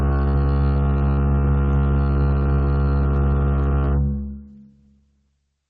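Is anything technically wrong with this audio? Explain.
Yes. Gain pumping runs through the whole music clip. The gain swings by about 5 dB, pulling down under loud moments. The likely cause is a fast limiter clamping excessive gain. The call codec's top end also stops near 8 kHz.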